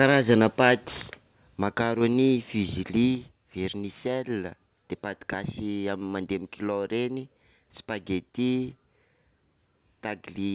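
The speech opens with a harsh, crackling edge on its loudest syllables for the first 0.72 s, where peaks are flattened about 4 dB past the converter's limit across roughly 2 percent of samples. This is likely microphone overload from an input volume set too high. The level then drops abruptly, voice and background together, at 1.02 s by about 5 dB, at 2.13 s by about 2 dB, and at 3.15 s by about 4 dB. These are microphone volume stepped down events, likely the call software cutting the device's input gain in steps after detecting clipping. The audio comes through a call path with nothing above 4 kHz, which fits G.711 mu-law at 64 kbps.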